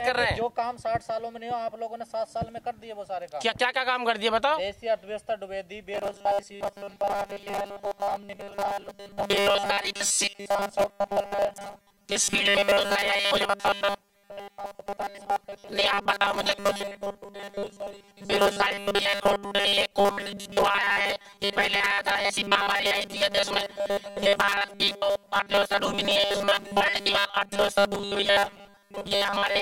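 From 5.92 s to the end, the sound becomes a rigid metallic buzz locked at 200 Hz, the robotic sound from repeated short buffers. Audio likely arrives too seldom, so a roughly 5 ms slice is replayed for most of the time. Unlike silent dropouts, nothing goes quiet.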